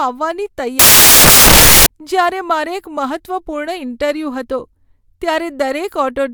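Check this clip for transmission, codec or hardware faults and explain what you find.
One fault is present. Samples built from the wrong bytes, 0.79 to 1.86 s: each sample's bytes are assembled misaligned or swapped, so the rapidly changing low-order bits land in the high-order position. The speech turns into loud, harsh broadband noise, close to white on the louder sounds.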